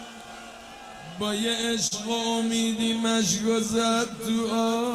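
The sender's audio clock runs roughly 4 percent slower than the receiver's throughout, a case of clock drift between sender and receiver. Because audio arrives a little more slowly than it is played out, the jitter buffer keeps draining, and the receiver must keep compensating for the whole clip. The effect is not a single event but a steady, uneven unsteadiness in timing that runs from start to finish.

From 0.26 s to 4.66 s, the receiver makes repeated timing corrections to stay in step with the slower sender, inserting short repeated pieces at irregular intervals, all in the same direction. Together they stretch the passage to about 97 percent speed, adding roughly a tenth of a second overall. Each insertion is small, so the sound comes across, if at all, as slight hiccups and a slightly dragging, uneven tempo.

At 1.87 s to 1.93 s, a short stall from a late packet occurs. A packet was not there when due, the buffer ran empty, and the receiver stretched the last sound by 40 ms until it arrived, then resumed from the same point. 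Nothing is lost, but one sound is held too long, with a slight buzz or dip, and everything after it sits 40 ms later.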